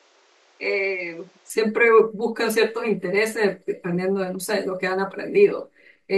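From 0.0 to 1.5 s the speech sounds dull and boxy, with nothing above 8.1 kHz. It is somewhat quieter, with a faint new noise floor well beneath it. At 1.5 s it clears up with no gap. The likely cause is an input switched to a poorer device.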